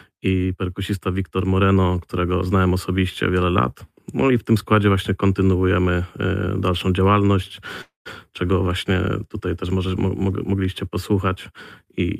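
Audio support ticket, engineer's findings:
Call audio freeze, 7.81–8.07 s. Sound stalls and the last bit of speech stretches into a fading buzz, then about 140 ms of silence before it picks up right where it left off. Roughly a quarter second inserted, nothing lost, so everything after runs 241 ms late. Likely cause: packets held up in transit, jitter buffer ran dry and the receiver padded the gap.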